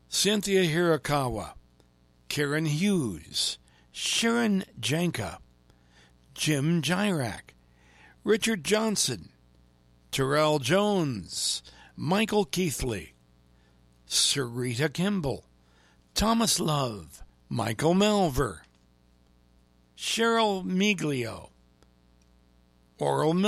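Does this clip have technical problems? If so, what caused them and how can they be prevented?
Yes. A steady, raspy mains buzz runs under the speech for the whole clip, sitting roughly 35 dB below it. Sharp spikes repeating with each half-cycle of 60 Hz mains have leaked into the signal, so the hum's harmonics reach well into the kilohertz range. Keep cables shielded and away from dimmers and power supplies to prevent this.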